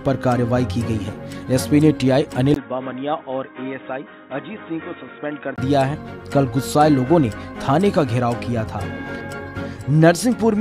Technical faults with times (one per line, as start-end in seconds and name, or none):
2.54-5.58 input switched to a poorer device